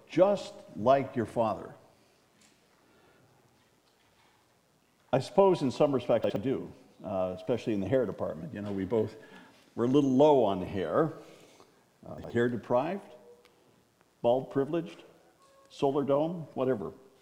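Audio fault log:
6.24–6.36 s and 12.18–12.30 s, chunks out of order: a brief jumbled moment as one 60 ms chunk plays a chunk late, swapping order with three hard joins.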